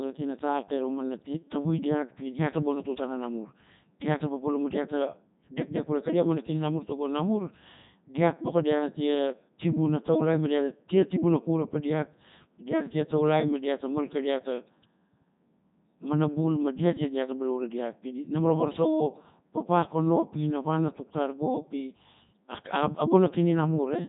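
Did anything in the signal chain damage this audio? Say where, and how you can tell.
Yes, the codec stage did it, and it lasts the whole clip. The speech has the robotic, buzzy quality of the Codec 2 vocoder, with heavy damage and nothing above 3.8 kHz. The decoder isn't rebuilding the original waveform. It resynthesises the voice from sine waves using only pitch, voicing, energy and a rough spectral envelope. Everything else is thrown away, and the sound points to the top 3.2 kbit/s mode.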